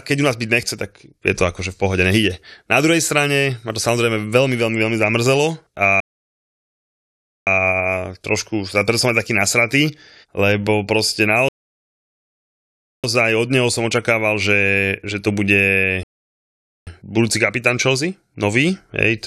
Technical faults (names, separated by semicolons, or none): rebuffering stall